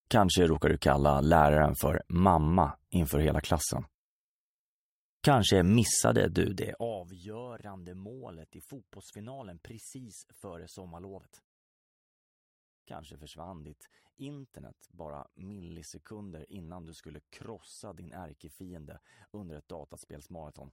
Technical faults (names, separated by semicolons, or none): none